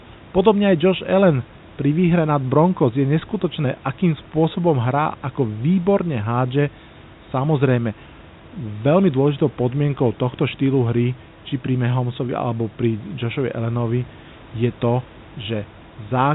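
Nothing goes wrong anywhere in this speech recording: it arrives over a narrowband phone-style call link that tops out around 4 kHz, with a bit of room noise sitting about 29 dB under the talking.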